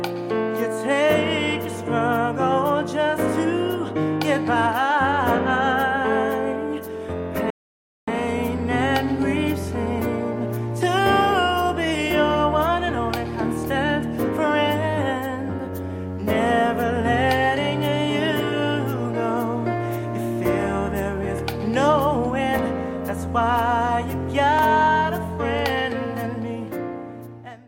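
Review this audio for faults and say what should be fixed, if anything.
A rebuffering stall stops the audio at 7.50 s and leaves silence until 8.08 s, adding about 0.57 s. The player ran out of downloaded data and waited for more. Playback then resumes exactly where it stopped, with nothing skipped. That is what separates it from a network dropout, which loses audio. The single long gap also sets it apart from short, repeating glitches. A larger startup buffer or adaptive bitrate switching would prevent the stall.

Periodic USB or driver dropouts appear between 22.59 and 25.59 s as a steady tick about once every 1.0 s, around four in all. Each one is a gap of roughly a millisecond filled with silence. Something in the background is blocking the USB bus or the audio driver at a fixed interval. The even spacing and the very short gaps separate these from random buffer underruns or a rebuffering stall. 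Finding and stopping the blocking background task, or updating the driver, would prevent them.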